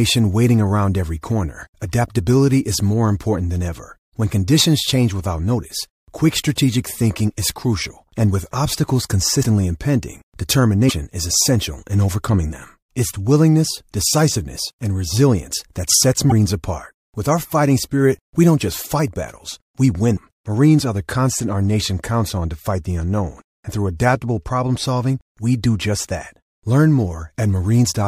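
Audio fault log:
13.13 to 13.16 s, broken MP3 bit reservoir: right before "willingness decisiveness and resilience" there's a quick 30 ms glitch where the speech skips forward. That's about one MP3 frame's worth (frames here run around 26 ms). The likely cause is a dropped frame: the next frame reaches back into the reservoir for borrowed bits, grabs the wrong bytes, and decodes garbage for a moment before the stream settles.
19.3 s to the end, channel delay (comb filtering): just after "we don't just fight" one channel slips behind the other by roughly a single sample, a few hundredths of a millisecond. Summed to mono, the shared content starts cancelling near the very top of the band, with the first notch somewhere around 20 kHz. So rather than an obvious phasey hollowness, the speech picks up a dulling of its highest air and sparkle.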